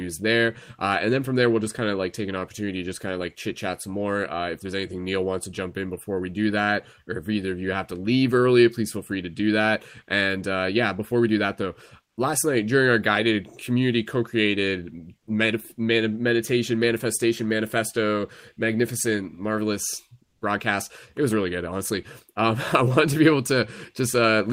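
At 15.19 s and 20.25 s the background briefly gives way to comfort noise in place of the background, lasting 80 ms and 160 ms. A steady, featureless hiss stands in for the real ambience, about 15 dB and about 12 dB quieter, likely from Opus discontinuous transmission.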